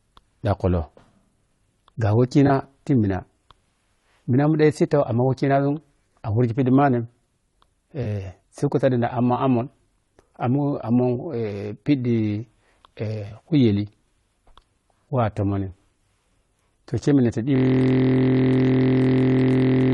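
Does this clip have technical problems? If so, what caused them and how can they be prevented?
Yes. Low-delay AAC compression runs through the whole clip: the voice sounds rough and grainy, with noise filling the gaps between harmonics and a thin, synthetic top band. This is likely AAC-ELD at about 32 kbps, where short frames give too little frequency resolution for the voice's harmonics. To prevent it, raise the bitrate or use a codec with longer frames when low delay isn't essential.

AAC frame loss with concealment appears at 2.47–2.50 s, 8.03–8.06 s and 13.27–13.32 s as brief smeared, noisy patches. The decoder filled each gap from the last good spectrum. The first two fit a single lost frame of about 20 ms, and the third fits roughly 40 ms. To prevent it, make the transport more reliable with forward error correction or a larger jitter buffer.

A system hang loop begins at 17.56 s and lasts to the end. 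One 23.22 ms piece of audio repeats about a hundred times, producing a steady 43.1 Hz buzz while the sound hardware cycles one ring buffer. This fits a 1024-sample buffer. To prevent it, fix the freezing driver or system process.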